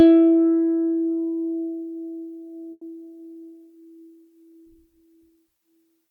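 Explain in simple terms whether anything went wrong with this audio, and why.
At 2.71 seconds the music briefly stalls. This is a call audio freeze. For about 100 ms the last bit of sound is stretched into a fading buzz, followed by a short moment of silence. At 2.83 seconds the music picks up exactly where it left off, now running about 100 ms later. Nothing is skipped. The likely cause is network packets arriving late, so the receiver ran out of audio and had to fill the wait.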